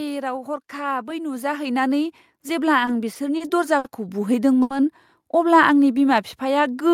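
From 0.72 s to 4.32 s the speech and the room noise behind it swell together by about 11 dB. This is automatic gain rising: the gain control judged the input too quiet and raised its gain progressively over those 3.6 seconds. Because it scales the whole signal, the background lifts along with the talker, so the noise floor audibly climbs.

Within that ramp, and just after it, come five short stalls from late packets, at 2.85, 3.13, 3.37, 3.78 and 4.62 s. Each time the jitter buffer ran dry because the next packet had not arrived, and the receiver held the last sound until it did, for 20, 20, 30, 60 and 80 ms respectively. Playback then resumes where it left off, so no speech is lost. Each stall is heard as a sound stretched unnaturally long, with a faint buzz or dip.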